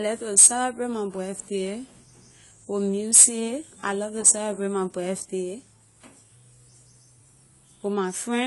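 The speech here has most likely passed through AAC compression at a low bitrate, the kind of heavy coding that fits an AAC-LC stream of around 32 kbps. To save bits, the encoder has discarded the top of the spectrum, so nothing remains above 11.5 kHz, and it has quantised what is left coarsely. Throughout the clip the damage is plainly audible: the speech sounds dull and smeared, with a warbling, fizzy texture on sibilants and sustained sounds.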